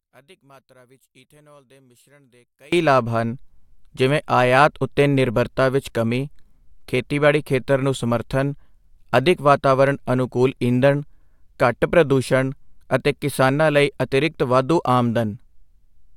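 From the start to 2.73 s, just before "ਲਾਭ ਹਨ", the speech nearly disappears, dropping about 32 dB to a faint trace. The likely cause is one channel inverted: reversed polarity on one stereo side cancels the shared centre content when summed to mono.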